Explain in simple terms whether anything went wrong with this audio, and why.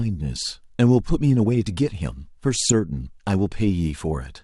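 At 2.63 to 2.72 s there is DAB burbling. Weak radio reception corrupted a few audio frames, so short blips of noise got into parts of the sound.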